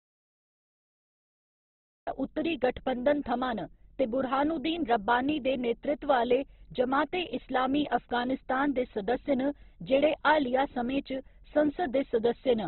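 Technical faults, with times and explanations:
Throughout: Opus compression, heavy. Nothing is present above about 4.1 kHz, so the speech is narrowband, dull and grainy. A spectrogram shows a hard ceiling near 4.1 kHz and speckled, noise-filled bands beneath it. This likely comes from CELT-mode encoding at 12 kbps.
0.00–2.07 s: audio dropout to silence, already under way when the clip begins. It is dead digital silence with no room tone, likely from a lost input, and the speech enters abruptly on "उत्तरी गठबंधन थमां". The waveform is a flat line and the spectrogram is empty.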